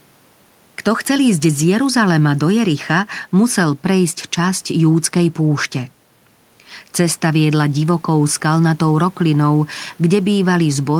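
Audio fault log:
Nothing to log here, as no technical faults can be heard anywhere in the speech.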